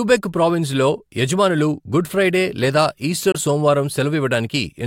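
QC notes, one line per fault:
3.32–3.36 s, Bluetooth dropout: likely a packet that missed its deadline on the wireless link, so the headphones output silence. Right after "గుడ్ ఫ్రైడే లేదా" the speech cuts to a gap of about 47 ms, fitting one lost 23 ms frame, then resumes further along.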